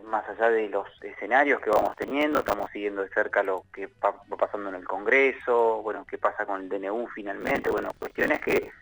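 Processor overload crackle appears from 1.73 to 2.67 s and again from 7.41 to 8.70 s. Dozens of buffers of about 10 ms each miss their deadline and replay stale audio with hard edges, producing gritty tearing crackle over the sound until the load clears.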